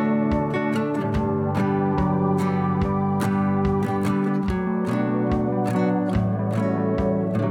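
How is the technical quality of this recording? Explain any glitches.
The technical quality of this music recording is sound, with no glitches to explain.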